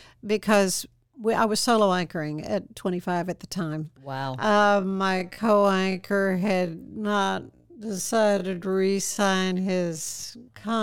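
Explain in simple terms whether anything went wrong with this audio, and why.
Something did go wrong, starting at about 4.37 s and lasting to the end of the clip. From that point the speech abruptly drops to half its previous pace while the pitch stays the same. This is a time-stretched section, likely from software lengthening that stretch of audio to fill a set duration. To keep the pitch unchanged, it repeats short slices of sound, which makes the slowed speech drag.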